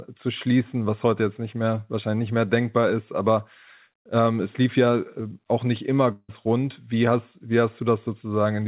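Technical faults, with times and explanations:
6.12–6.30 s, long network dropout: After "äh auch nicht immer", the sound turns into a fading buzz or hiss for 164 ms, then 40 ms of silence. It resumes with a short piece missing. The likely cause is lost packets, with the receiver stretching the last sound to fill the gap.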